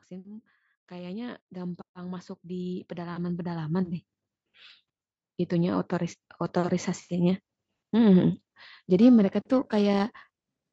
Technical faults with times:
0.08-4.02 automatic gain rising
9.01-10.72 periodic clock jitter

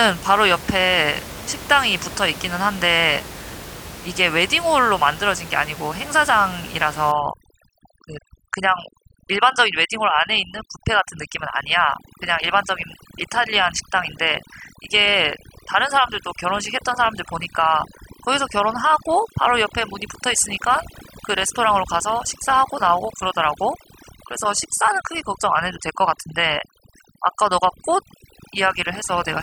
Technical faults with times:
7.12-29.43 overdone noise removal

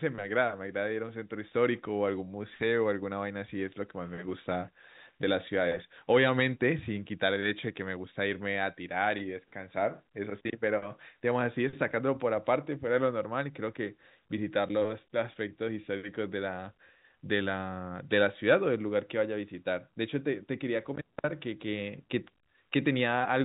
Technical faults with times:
none

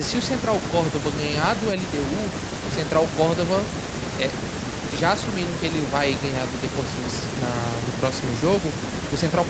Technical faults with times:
none

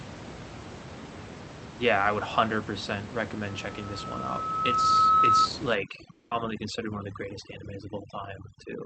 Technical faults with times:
3.46-5.49 loudspeaker feedback squeal
5.75-8.85 overdone noise removal
6.11-6.33 long network dropout

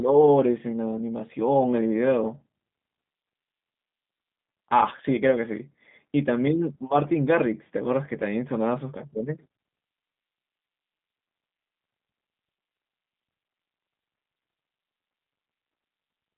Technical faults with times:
0.00-16.37 G.729 codec

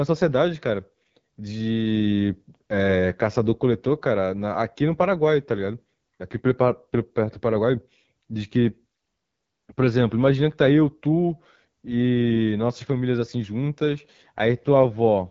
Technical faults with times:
0.00-15.31 AMR wideband (HD Voice) codec

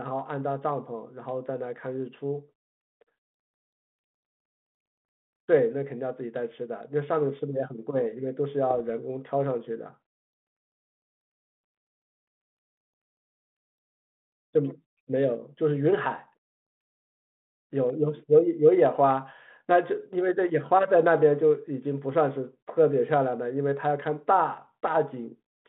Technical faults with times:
8.70-8.78 bit errors on an ADPCM link

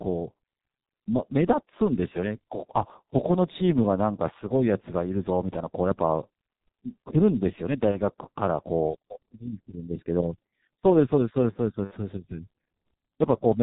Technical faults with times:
0.00-13.63 G.723.1 codec
7.91-7.98 VoIP packet loss concealed by the speech codec
11.84-11.94 VoIP packet loss concealed by the speech codec

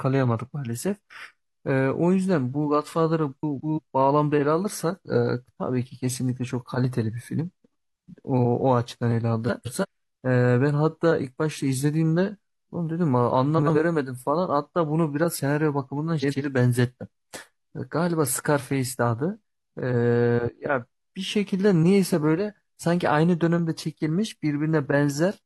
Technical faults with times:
3.43-3.79 frames out of order
9.48-9.85 frames out of order
13.58-13.77 frames out of order
16.21-16.42 frames out of order

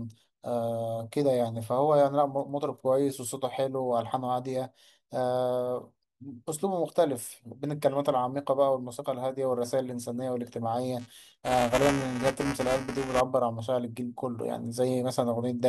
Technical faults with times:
10.99-13.20 buffer tearing

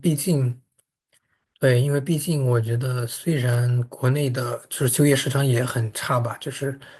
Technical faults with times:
none

